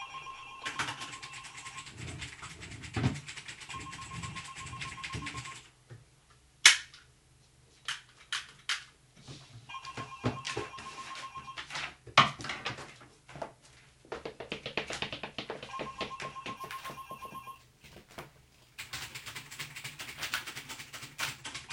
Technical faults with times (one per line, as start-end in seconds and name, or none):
16.57-21.42 imaging from sample-and-hold upsampling